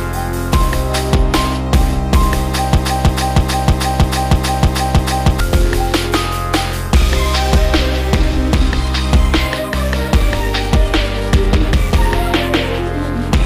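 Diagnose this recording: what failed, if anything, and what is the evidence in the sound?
A broken-record loop runs from 2.77 to 5.40 s. A 0.32 s fragment repeats exactly, back to back, eight times. The audio due in that span never plays. The likely cause is a stalled playback or stream buffer resending the last fragment it held.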